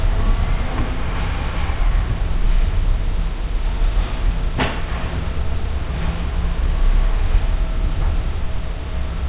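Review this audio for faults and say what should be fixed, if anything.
No faults found, and nothing needs fixing.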